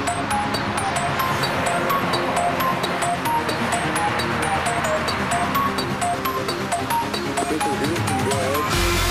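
Audio missing between chunks shows up as abrupt skips at 0.90, 2.85, 6.75 and 8.70 s. At each one, a very short piece of the sound, roughly 50 ms, vanishes and the audio on either side is butted together with no gap of silence. The skips land on a near-regular grid, which points to a recorder or processor handling the audio in 2-second chunks and likely dropping samples each time it closes one chunk and opens the next.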